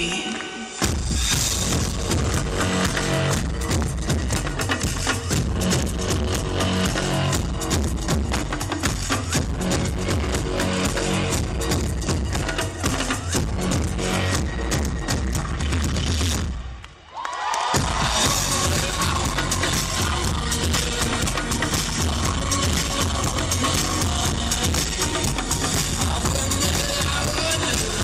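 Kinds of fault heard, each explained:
Skip ahead: at about 13.99 s roughly a second of audio just vanishes, and playback jumps straight to later material with essentially no gap between the two sides.
Jitter buffer speed-up: from 16.51 to 17.17 s the receiver trims short pitch-period chunks to drain excess buffering, so the audio runs about 10% fast at unchanged pitch, losing around 70 ms.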